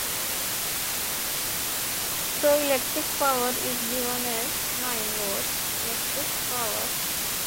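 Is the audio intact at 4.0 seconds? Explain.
No. At 4.0 seconds, as everywhere else in the clip, the audio carries low bit depth with dither. The signal is held to what sounds like only 3 bits, and dither is added before rounding, so the coarse quantisation error becomes a constant, even hiss at roughly the same level as the sound itself. Without dither, the same reduction would give a gritty distortion that follows the signal and falls silent with it. Here the hiss stays uniform and undistorted.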